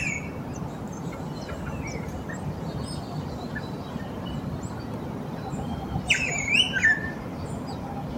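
No technical faults can be heard anywhere in the clip.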